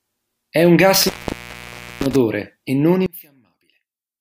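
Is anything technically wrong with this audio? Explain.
Yes, there are two faults. From 0.95 s to 2.16 s there is an intermittent contact: a loose cable or plug breaks the signal path for about 0.92 s. The audio drops out with crackle at both edges and only faint hiss remains until it returns just before "e non".

After "e non", from 3.06 s to the end of the clip, the speech falls by about 21 dB to a faint residue. The likely cause is one channel inverted: with reversed polarity, the material common to both channels cancels when they combine in mono.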